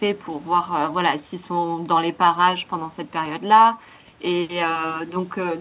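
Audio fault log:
No fault is found in the speech, which came through a WebRTC call path whose G.711 A-law coding at 64 kbps leaves nothing above 4 kHz.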